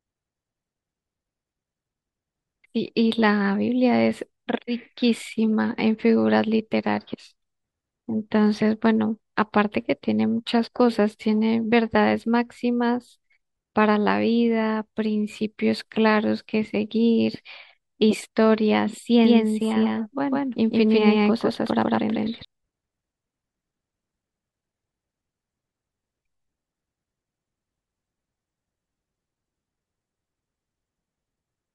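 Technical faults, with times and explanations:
19.25 to 22.45 s, doubled audio track: a second full-band copy of the speech trails around 150 ms behind at roughly equal level, likely a slower capture path mixed back in. Unlike echo, it has no decay or room colour and starts and stops abruptly.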